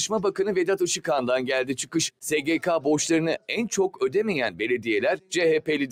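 Noise suppressor applied to music or sounds, throughout: a speech-oriented suppressor treats sustained tones and tails as noise, so the level pumps by around 5 dB. Sound cut by the noise suppressor, 5.17 to 5.32 s: the suppressor mistook this passage for noise and pulled it down by as much as about 11 dB for roughly 150 ms.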